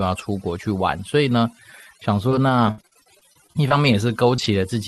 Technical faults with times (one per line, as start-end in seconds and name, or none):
0.00-4.88 overdone noise removal
2.29-4.64 repeated packet loss (robotic sound)